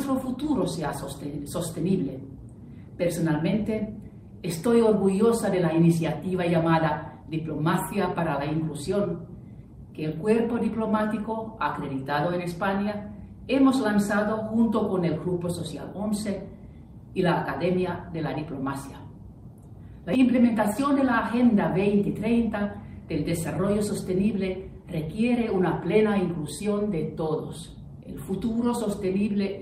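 No dropouts, clicks, distortion or level problems turn up anywhere in the recording.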